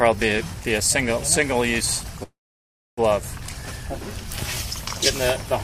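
At 2.23 s the sound stops moving forward. The last moment is briefly drawn out as a fading buzz, then drops to silence for about 640 ms before the audio resumes at 2.99 s from exactly where it left off, with nothing skipped. This is a call audio freeze, likely caused by packets stalling in transit until the jitter buffer ran dry. The receiver filled about 741 ms, and everything after plays that much later.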